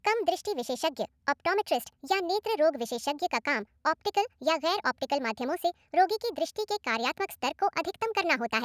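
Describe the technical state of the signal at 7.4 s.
At 7.4 s you're still hearing the wrong sample rate problem, which runs through the whole clip. The speech comes out about 1.45 times too fast and roughly 6.5 semitones high, chipmunky and rushed. That fits 22 kHz audio being played back at 32 kHz without conversion.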